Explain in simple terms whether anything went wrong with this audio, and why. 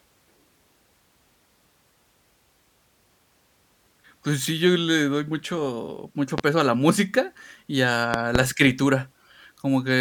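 Two loud pops interrupt the speech: a single one at about 6.38 to 6.42 s, and a quick double pop between 8.14 and 8.39 s, the second burst even louder. Each is a sharp thump that jumps well above the voice. The likely cause is a sudden electrical jolt, such as a plug, switch or static discharge, reaching the signal. Unlike a dropout, where the sound briefly vanishes, the speech carries on underneath each pop without a gap.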